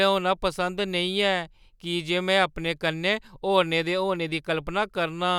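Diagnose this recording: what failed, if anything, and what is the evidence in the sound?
Nothing in the signal chain failed: the speech has an intact waveform throughout, and no stage from capture to playback leaves an audible trace.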